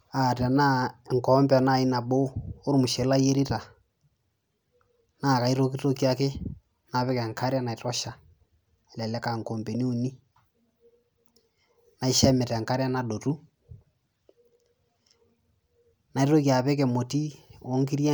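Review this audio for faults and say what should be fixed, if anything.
No faults turn up in the audio, so nothing needs to be fixed.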